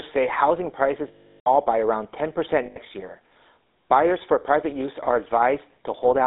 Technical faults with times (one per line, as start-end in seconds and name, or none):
0.00-6.27 GSM full-rate codec
1.08-1.49 lost GSM frames
2.66-2.78 lost GSM frames